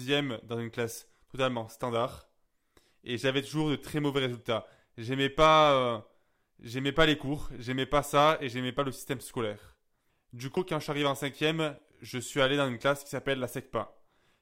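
At 10.57 s compressed frames are skipped: about two 92.9 ms frames drop out, jumping the speech ahead roughly 0.2 s.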